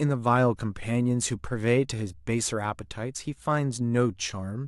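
No technical faults can be heard anywhere in the speech.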